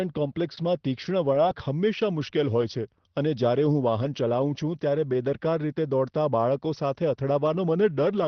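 At 0.55 s a packet arrives late and the jitter buffer runs dry, so the receiver stretches the last sound by about 17 ms until it turns up at 0.60 s. Nothing is lost, but that moment hangs slightly too long with a faint buzzy wobble.

Overlapping it, from 0.57 to 0.61 s, a lost packet is rebuilt from error correction: the next packet's low-bitrate copy fills the 40 ms, so there is no gap, only a rougher, noisier patch within the 6 kHz Opus band. The same repair occurs at 1.33 to 1.37 s and 1.45 to 1.49 s, just before "હંમેશા મુશ્કેલ હોય છે", each a brief grainy smear.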